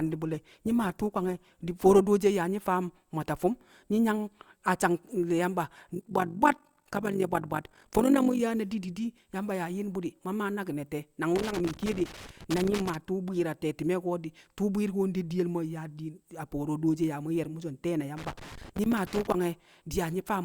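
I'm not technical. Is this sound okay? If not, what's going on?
No, not quite. For the first 2 seconds you're hearing an adaptive stream starting at a low bitrate: the speech sounds dull and a bit smeary, then suddenly sharpens once the player picks a better version.

From 5.95 to 8.41 s there's overlap-add ripple: the audio was chopped into pieces and rejoined unevenly, so the level wobbles around fifty times a second, giving a rough, robotic flutter.

Then at 11.36 to 12.95 s and again at 18.17 to 19.34 s comes loose connector crackle, a bad cable contact cutting in and out and causing bursts of scratchy crackling.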